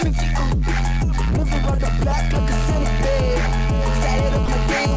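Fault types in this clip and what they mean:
GSM signalling bursts: A 2G phone nearby is only sending short groups of radio bursts, the sort of chatter it does before a call or text comes in, and the audio circuitry rectifies them into sound. From 1.55 to 2.13 s you get that galloping dit-dit-dit of short buzzes at the 217 Hz burst rate, sitting around 10 dB below the wanted audio.
GSM phone buzz: Here the phone has moved into a full call, so it transmits continuously at 217 bursts a second, and the rectified pulses become a hard, raspy buzz packed with harmonics. It starts at 2.34 s and runs steadily to the end of the clip, about 12 dB below the signal and with no relation to it. The harmonics stop short of 8 kHz, where the call codec's band ends.
Sound dropped by the voice detector: Between 4.46 and 4.48 s, 20 ms of the sound disappears and a short patch of steady comfort noise takes its place before the audio picks up again. 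The likely cause is the sender's voice detector judging that moment to be background and briefly pausing transmission, with the receiver filling the gap with generated noise so it doesn't fall to dead silence.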